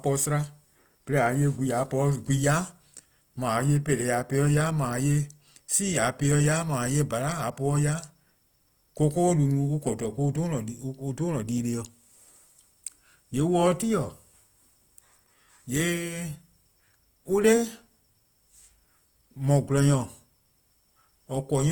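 From start to finish the speech carries a plainly audible grainy, rough texture, likely from Opus compression in its CELT music mode at a low rate that fits roughly 24 kbps. Short of bits, the encoder keeps each band's energy but fills the detail with folded or noise-like content, so tones turn sandy instead of hollow. Unlike MP3 there is little swirling or watery warble, and the band stays full, reaching about 20.2 kHz.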